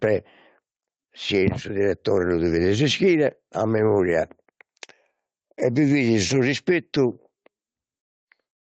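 Gain pumping runs through the whole clip: the level keeps swelling and ducking by about 5 dB. The likely cause is gain set far too high for the microphone, with a fast limiter or compressor clamping down on every loud syllable. The squeezed range between loud and soft gives the voice a flattened, squashed quality.

A lost packet rebuilt from error correction follows at 3.71 to 3.85 s, right after "devides ischire a". No gap is heard, because the decoder filled roughly 80 ms with the low-bitrate backup copies that Opus carries in each following packet, which fits four separate lost packets. Those stand-in frames sound rougher and noisier than the surrounding audio, a brief grainy patch within the call's 8 kHz bandwidth.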